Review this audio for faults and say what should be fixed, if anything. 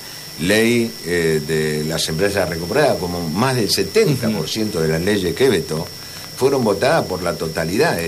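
A train of clicks runs from 5.25 to 8.05 s: about fifteen similar pulses at an uneven pace of roughly 4.3 per second, peaking a few decibels above the sound itself, likely from interference from nearby equipment or a faulty connection or power supply. To prevent it, move the recording chain away from noisy equipment and check the connections and power supply.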